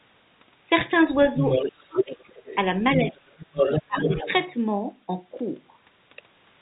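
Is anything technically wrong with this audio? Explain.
Yes, there are three faults.

At 0.8 s there is packet loss with the last packet repeated. One short packet, about 10 ms, was lost and replayed, giving a small blip. On a waveform it shows as a copied segment with a discontinuity at each join.

From 1.42 to 2.56 s and from 3.11 to 4.53 s, the other side's voice leaks through at roughly the talker's own level. The likely cause is loudspeaker echo the canceller missed. A spectrogram shows a second, overlapping harmonic pattern.

Speech is suppressed in double talk at 1.62–2.5 s, 2.96–3.47 s and 3.87–4.31 s. The talker dips by roughly 25 dB in patches, seen as gated holes in the waveform envelope where the suppressor likely ducked both voices.

The narrow telephone band, with nothing above 4 kHz on the spectrogram, comes from the A-law telephone coding.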